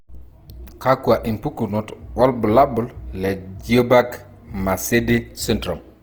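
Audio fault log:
throughout, Opus compression: the speech has a grainy, rough edge all the way through, with tonal parts turning noisy rather than clean, while the top end stays open right up to about 20.2 kHz. That's the likely signature of Opus running in its music (CELT) mode: band energies are kept but the fine detail is filled from folded lower bands or noise when bits run short, which fits a low rate around 24 kbps.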